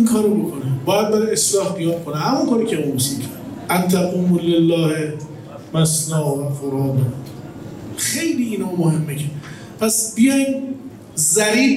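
No technical faults can be heard anywhere in the signal; the audio stays continuous and stable throughout.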